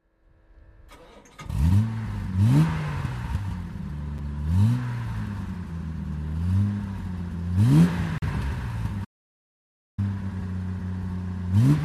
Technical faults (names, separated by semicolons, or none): gap between stream segments; playback stall